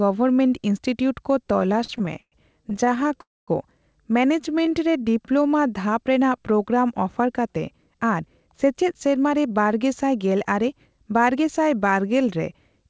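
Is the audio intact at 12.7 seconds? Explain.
Yes, the speech is intact at 12.7 seconds, passing through the WebRTC call path with nothing above 8 kHz, as expected for G.722.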